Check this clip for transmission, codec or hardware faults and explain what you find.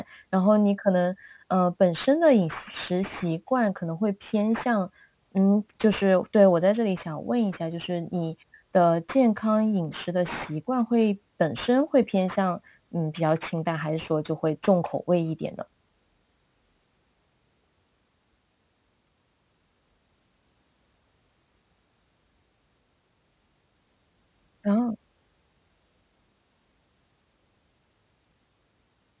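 One fault is present, and it runs through the whole clip.

Aliasing, from start to end: the speech was resampled downward without an anti-aliasing filter first, in a way that fits a drop from 48 kHz to 8 kHz. Everything above the new 4 kHz limit folds back below it as false, unrelated frequencies, sitting roughly 20 dB under the speech. Sibilants come out gritty and metallic, and energy piles up hard against the 4 kHz edge.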